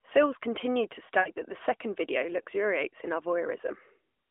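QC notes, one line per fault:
1.20–1.30 s, lost AMR speech frames: after "continued to", about 60 ms of speech drops out, which fits three 20 ms frames failing their checks. The decoder repeats the last good pitch and vocal tract settings at falling gain, so the sound smears and fades before "that the second video" returns weak or rough. On a spectrogram the harmonics flatten into a frozen, dimming band, and the waveform envelope tapers toward silence across the gap.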